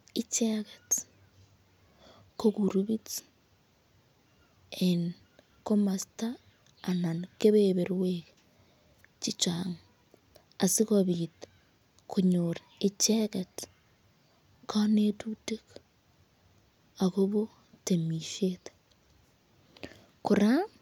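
Nothing in the speech stood out as a fault on listening.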